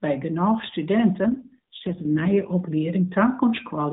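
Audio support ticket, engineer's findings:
AMR rate drop, 1.26–2.54 s: speech turns buzzy and synthetic with no gap and unchanged narrowband cut-off, unlike loss or bandwidth switching. Fits a 12.2 to 4.75 kbps mode fallback.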